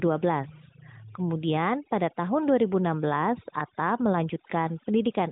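Throughout, overdone noise removal cuts frequency bands near its noise estimate far down, taking quiet speech with them: twinkling specks in near-silent gaps, all within a band ending near 3.8 kHz.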